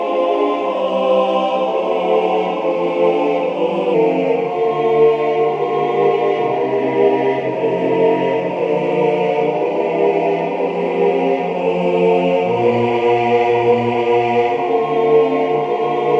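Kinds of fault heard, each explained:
Wrong sample rate: from 3.94 s the audio runs about 8% slow and 1.5 semitones low, fitting 24 kHz material played at 22 kHz; spectrogram features sit lower and stretch longer.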